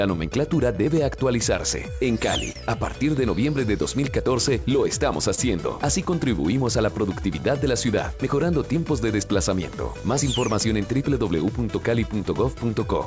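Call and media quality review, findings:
Clock drift between sender and receiver, throughout: sender clock about 2% slow, jitter buffer repeatedly draining, so small hiccups recur at uneven intervals across the whole clip.

Short stall from a late packet, 2.52 s and 5.35 s: buffer underrun, last sound held about 34 ms then 28 ms until arrival, nothing lost, brief buzz-like hold.

Repeated timing corrections, 6.54 to 12.66 s: receiver inserting repeated slices to keep pace with slow sender, playout near 98% speed, roughly 150 ms added.

Audio band-limited with nothing above 8 kHz, consistent with a G.722 wideband call path.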